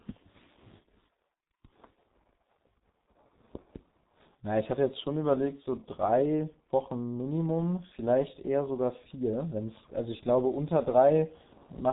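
From start to finish the speech carries heavy G.723.1 codec damage. Nothing survives above 3.8 kHz, and the vocal model is refreshed only every 30 ms frame, so consonants smear into their neighbours and the voice turns muffled and hoarse. The coarseness points to a rate around 6.3 kbit/s. A simple low-pass filter would only dull the sound; here the grainy, rasping texture and blurred onsets reveal a low-rate speech codec.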